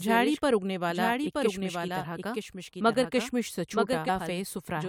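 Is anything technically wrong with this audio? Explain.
Yes. A doubled audio track runs through the whole clip. A second copy of the speech trails the original by about one second, roughly 5 dB quieter. It has no decay or room colour. This is likely a second capture path or misaligned edit.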